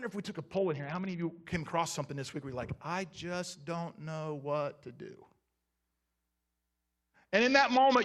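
A Bluetooth SBC bit pool drop hits twice, from 0.54 to 1.45 s and again from 7.34 s to the end. A congested link forced the encoder to spend far fewer bits, consistent with the bit pool falling from around 28 to about 7, near 66 kbps. The highest sub-bands get almost nothing and the rest are coarsely quantised, so the speech turns dull and muffled at the top while a gritty grain rides over it until the rate recovers.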